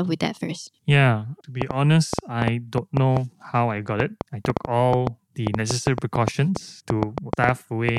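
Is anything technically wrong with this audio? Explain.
Yes. From 1.62 s to 7.98 s, a train of clicks ticks and pops over the speech, around 30 of them at about 5.0 per second with uneven spacing, each peaking far above the speech level. They sound alike in shape and carry straight through the pauses. The likely cause is an outside source injecting repeated short pulses into the signal path, such as interference from nearby equipment or a faulty connection or power supply.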